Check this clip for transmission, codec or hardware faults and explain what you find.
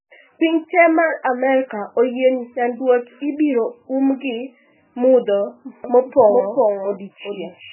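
Two faults are present. The clip carries heavy codec damage throughout, and a second copy of the audio appears near the end.

MP3 compression affects the whole clip. Nothing is heard above 3 kHz, so the speech sounds dull. It also has a watery, swirling quality. This is likely a very low MP3 bitrate, fitting roughly 8 kbps. The encoder drops the treble and switches weak frequency lines on and off.

A doubled audio track starts abruptly at 5.84 s and lasts to the end. A full-band copy trails the original by roughly 400 ms, about 5 dB quieter. It has no decay or room colour. The likely cause is the same audio mixed in twice through a slower path.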